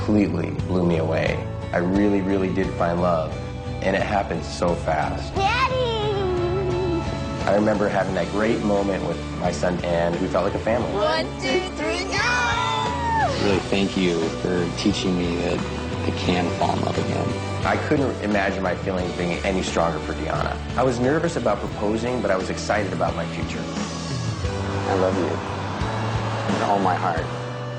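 Two brief jumbled moments break the audio, one at 5.33 to 5.35 s and one at 21.67 to 21.69 s, each a tiny scrambled flicker. Both are chunks out of order: a 10 ms block arrived one block late and plays after the block that should follow it. Nothing is missing, but the swap creates three abrupt joins where the waveform doesn't line up, which produces the momentary garble.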